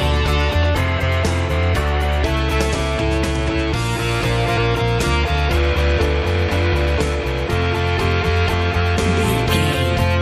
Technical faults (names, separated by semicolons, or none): damaged data in a compressed stream